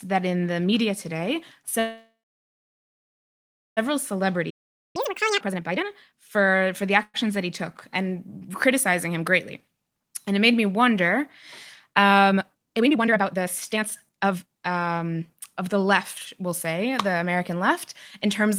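A speech clip with delivery faults from both the network and the player. Packets were likely held up and the jitter buffer ran dry, causing a call audio freeze from 1.79 to 3.79 s, right after "in the media today". The receiver stretched the last sound into a fading buzz or hiss that fell silent for about 1.65 s before the speech resumed where it had stopped. A shorter freeze of the same kind, 0.11 s, occurs at 7.03 s, just before "that he took". To shed built-up delay, a jitter buffer speed-up from 3.91 to 6.98 s repeatedly cuts pitch-period slices, roughly half a second in total. The speech runs at 117% speed with unchanged pitch and sounds hurried. Within that stretch, the player likely ran out of data, producing a playback stall of 0.45 s of silence from 4.50 to 4.96 s. Catch-up at higher speed follows until 5.41 s: the backlog plays at double speed, with pitch raised roughly ten semitones, before returning to normal. 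A second jitter buffer speed-up from 12.31 to 15.92 s, ending before "we'll say the", runs at 144% and removes about 1.5 s, so the speech sounds noticeably rushed at normal pitch.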